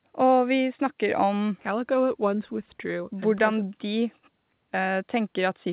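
No technical faults can be heard in this speech.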